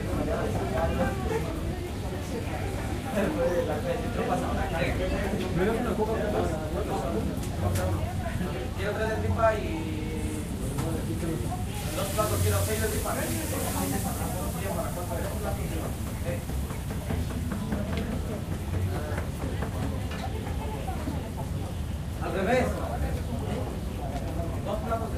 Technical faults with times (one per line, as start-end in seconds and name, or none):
none